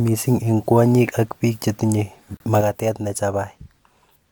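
A speech clip with two faults. At 2.37 s a hard-edged hole of silence about 31 ms long cuts into the sound and ends at 2.40 s. This is a gap between stream segments: the timestamps of two consecutive segments, which here appear to be 2 s long, do not quite meet, so the player pads the space with silence. Nothing is missing, but time is added. From 2.61 s to the end, the level drops abruptly by about 6 dB and stays down. This is most likely one channel dropping out: when one stereo side goes silent, everything shared by both channels loses half its contribution to the mono sum.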